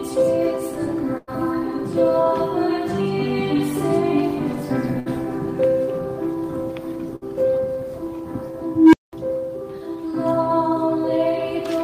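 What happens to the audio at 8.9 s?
At 8.9 s the audio is in the middle of an unstable filter event spanning 8.66 to 9.13 s. A recursive filter with bad coefficients feeds its output back and grows without limit. A low tone of around 300 Hz swells over 270 ms and reaches clipping just after 8.9 s. The values then overflow and the output drops out for 200 ms until the filter resets, heard as a loud rising hum cut off into a short silence.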